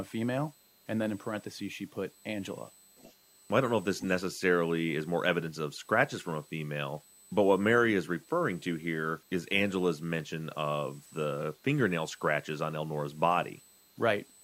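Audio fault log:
throughout, USB whine: A steady 8 kHz whine sits about 30 dB below the speech. That pitch matches the 125-microsecond microframes of USB bus current leaking into the audio.
throughout, low bit depth without dither: Grainy distortion follows the speech and turns quiet passages gritty. This likely comes from truncation to 8 bits without dither, leaving error around 30 dB down.
2.97 to 3.14 s and 3.99 to 4.12 s, echo leak: Brief delayed copies of the speech return 434 ms late. The first is faint and the second louder. A far-end echo canceller likely let loudspeaker pickup through.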